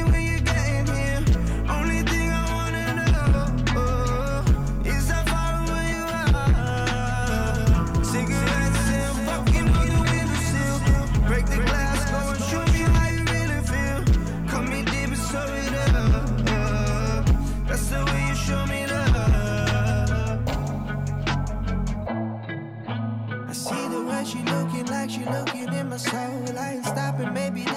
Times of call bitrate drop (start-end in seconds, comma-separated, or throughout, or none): none